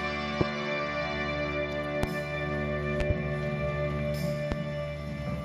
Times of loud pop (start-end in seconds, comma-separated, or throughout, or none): 0.41-0.44, 2.03-2.06, 3.00-3.13, 4.52-4.55